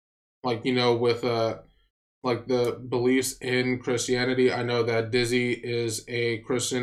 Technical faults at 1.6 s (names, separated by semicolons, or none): none